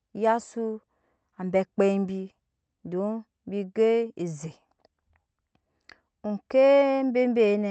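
No faults in the speech; the call-codec path behaves as expected, with content rolling off above 8 kHz and the usual coding texture.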